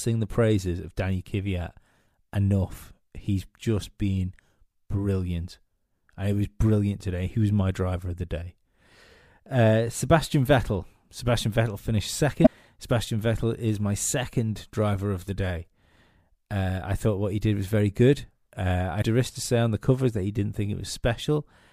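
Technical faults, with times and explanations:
12.42–12.47 s and 18.98–19.03 s: damaged data in a compressed stream. The speech is interrupted twice by a short digital glitch lasting under 50 ms, which replaces the audio for that span. At each point the compressed bitstream carries corrupted bytes, so the decoder misreads or refuses those frames, loses frame sync and searches until it finds the next valid frame header and resumes normal decoding.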